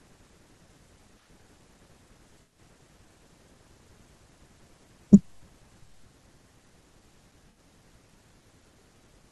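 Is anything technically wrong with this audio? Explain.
Yes. At 2.42 to 2.58 s and 7.50 to 7.59 s the speech turns briefly smeared and noisy, about 107 ms and 64 ms long. This is AAC frame loss with concealment: the decoder rebuilt missing frames from the last good spectrum.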